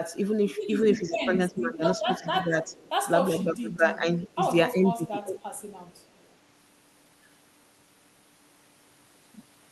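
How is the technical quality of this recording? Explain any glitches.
The recording has two recurring call-audio faults layered on speech that has passed through a call codec, whose top end stops around 12 kHz, as expected of Opus at a moderate rate.

Speech suppressed in double talk occurs from 0.95 to 2.75 s, 3.28 to 4.42 s and 4.75 to 5.4 s. The voice sinks in level and thins out in patches. It falls by about 15 dB in the first and third stretches and about 20 dB in the second, with roughly a second of each of the first two and about 0.7 s of the third affected. The likely cause is an echo canceller that heard both ends talking at once and attenuated everything to be safe.

An echo leak shows up as faint, delayed repeats of the voice at 2.04 to 2.26 s, 2.67 to 2.91 s, 4.23 to 4.30 s and 5.59 to 6.33 s. Each trails the original by about 0.36 s and sits about 25, 30, 25 and 40 dB below the speech. 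This is likely loudspeaker sound reaching the far-end microphone that the canceller failed to remove fully, so a copy of the voice was sent back.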